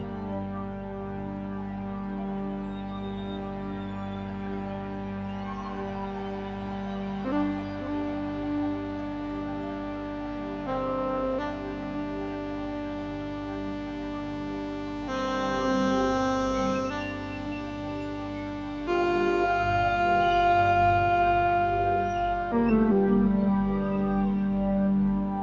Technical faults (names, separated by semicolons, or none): noise suppressor applied to music or sounds